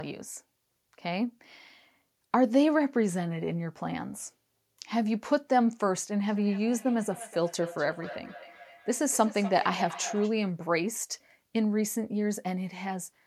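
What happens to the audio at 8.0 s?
At 8.0 s you're in the middle of a feedback echo between two devices, running from 6.28 to 10.37 s. Two devices on the same call are in one room, so one plays back what the other's microphone sent, and that microphone hears it again. Neither echo canceller catches it because it isn't coming from its own speaker. The speech returns roughly every 300 ms, thinner and more ringing each time, peaking about 14 dB under the direct speech.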